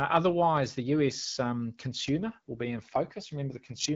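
At 2.05 s an AMR rate drop sets in and lasts to the end. The speech turns rougher and more synthetic, consistent with the HD Voice link falling from 12.65 to about 8.85 kbit/s. Unlike a bandwidth fallback or packet loss, the band stays just as wide and nothing drops out.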